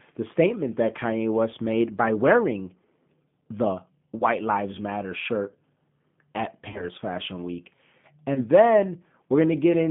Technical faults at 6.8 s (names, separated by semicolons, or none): G.729 codec; VoIP packet loss concealed by the speech codec